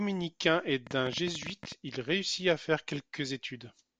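A train of clicks runs through this speech clip from 0.87 to 1.73 s: about fifteen similar pulses at roughly 14 per second, unevenly spaced and peaking around 10 dB above the speech, heard as ticking over it, likely interference from nearby equipment or a faulty connection or power supply.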